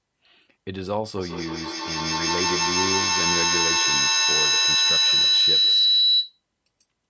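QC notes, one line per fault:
1.17 to 6.43 s, feedback howl: a tone near 4 kHz swells to about 9 dB above the speech, with the loop repeating roughly every 150 ms as the microphone-to-loudspeaker loop gains level each pass. Unlike echo, the repeats grow rather than fade and narrow onto one pitch.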